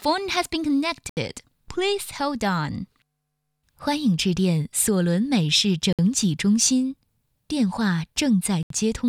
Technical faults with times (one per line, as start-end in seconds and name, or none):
1.09-1.17 Bluetooth stall
5.93-5.99 Bluetooth stall
8.63-8.70 Bluetooth stall